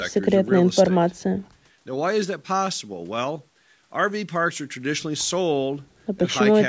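No faults heard; the speech carries the usual call-microphone processing, with the lowest bass filtered out and nothing above 8 kHz, which is normal for that path.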